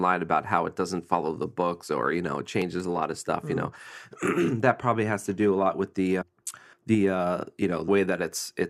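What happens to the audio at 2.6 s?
At 2.62 s, between "or you know it" and "a lot of stuff", there is a brief skip: a sliver of sound, roughly 20 ms, is missing, and the audio on either side is butted together with no gap of silence. This is audio missing between chunks, likely caused by the recorder or processor dropping a short piece while closing one block and opening the next, which fits processing in 4-second chunks.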